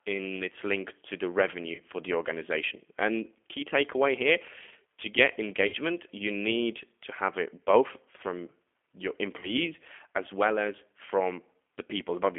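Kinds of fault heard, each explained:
G.729 codec: an 8 kbit/s VoIP codec that rebuilds the voice from a vocal tract filter, pitch predictor and sparse pulses. Here it sounds plainly rough and synthetic, and a spectrogram shows energy confined to roughly 250 Hz to 3.4 kHz.
VoIP packet loss concealed by the speech codec: the decoder stretches its last pitch and filter into a buzzy tone or coloured noise that fades, at 1.75 s after "its link to the", 5.67 s after "takeaway here to get" and 9.40 s after "it both from your", showing repetitive decaying cycles and frozen harmonics.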